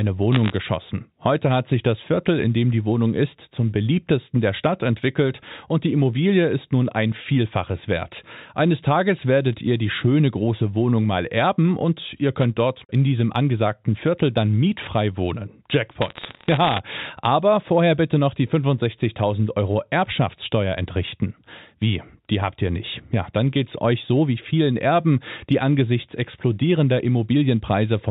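A speech clip over a G.711 telephone line with bit errors on the digital phone line. Flipped bits corrupt single samples, giving sharp crackly ticks at 0.32 to 0.52 s, 12.42 to 12.45 s after "mal erben und ihr", and 16.01 to 16.80 s before "aber vorher bitte noch". The error rate is roughly half a percent.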